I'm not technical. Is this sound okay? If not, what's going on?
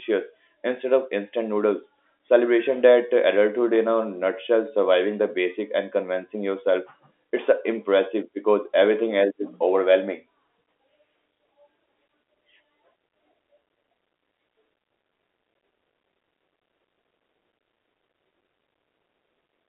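Yes, nothing here sounds wrong.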